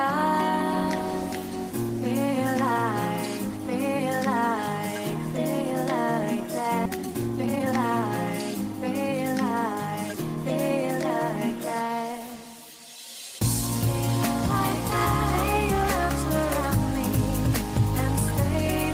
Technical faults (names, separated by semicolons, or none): skip ahead; jitter buffer speed-up